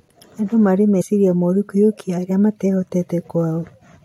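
At 1.00 to 1.02 s, compressed frames are skipped: about two 23.2 ms frames vanish, so the speech jumps ahead roughly 50 ms rather than falling silent.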